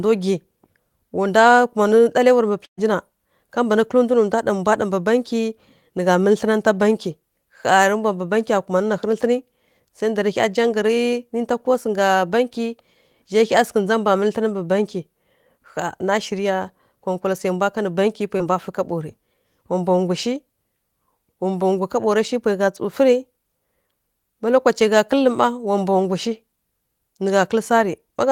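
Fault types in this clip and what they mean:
Burst of packet loss: Around 2.65 to 2.79 s, roughly 120 ms of audio never arrives. The receiver stretches the last sound into a short held continuation that fades out, leaving about 90 ms of near-silence before the speech picks up further along with that stretch gone. What sets it apart from the short concealed loss is the length: the fill runs out and decays into an audible hole instead of blending smoothly back.
Short concealed packet loss: At 18.38 to 18.41 s, only about 20 ms of speech goes missing. The decoder bridges it by extending the preceding sound for roughly 16 ms and crossfading straight back into the real signal, so it comes across as a quick smear or wobble with no silence at all. Unlike the burst at 2.65 s, the gap is short enough that the concealment covers it fully and nothing fades out.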